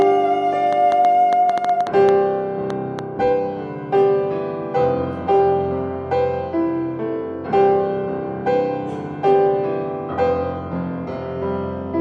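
From 0.02 s to 3.0 s, a train of clicks sits over the sound. Around fifteen sharp pulses arrive, about 4.4 per second. Their spacing is uneven, so the rhythm stumbles rather than ticks steadily. Each click has much the same shape and pokes out roughly 10 dB above the sound beneath it. They read as popping laid on top, not part of the material. The likely cause is interference from nearby equipment or a faulty connection or power supply.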